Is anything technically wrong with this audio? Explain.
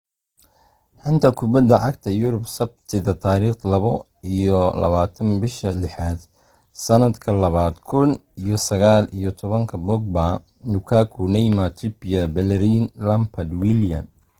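Yes. From start to finish the speech sounds rough and grainy, with tonal parts turned hissy rather than clean. The top end still reaches about 20.1 kHz, so the sound isn't muffled, but the detail within it is coarse and the damage is plainly audible. This is likely Opus compression in its full-band music mode at a low rate, around 16 kbps: starved bands get filled with noise or copied lower content, which produces the grain.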